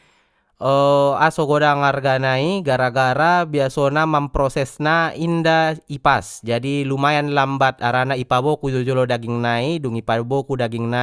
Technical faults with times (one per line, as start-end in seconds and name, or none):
none